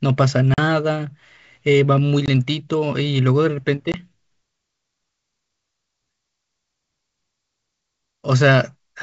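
Packet loss on the ADPCM call leaves hard-edged silent holes at 0.54–0.59 s (40 ms, about two packets), 2.26–2.29 s and 3.92–4.02 s (20 ms each). The decoder's predictor and step size lose track of the sender's, so speech returns with brief distortion.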